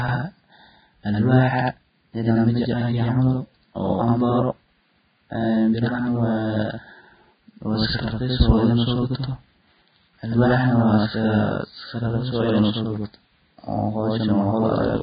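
Speech runs the full clip with a second copy of itself trailing by about 85 ms at equal level, heard as a doubling or slap echo on every syllable. This channel delay (doubling) comes from one channel arriving late, which fits a 4096-sample buffer, before the two are summed to mono. The audio is also band-limited, with nothing above 4.9 kHz, and the remaining upper range sounds hissy and grainy, with roughened tones and smeared consonant attacks. The likely cause is heavy Vorbis compression at a very low bitrate, around 16 kbps, where the treble is quantised so coarsely that detail turns into noise.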